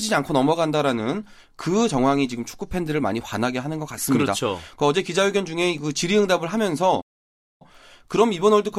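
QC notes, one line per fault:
7.01–7.62 s, playback stall: the player likely ran short of data or had its output thread blocked, so nothing reached the output for 0.59 s. The speech cuts off mid-flow into silence, then resumes once playback recovers.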